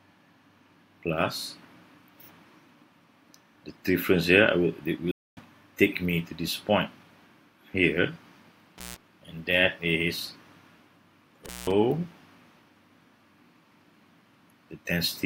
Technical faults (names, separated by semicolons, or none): stream reconnect; intermittent contact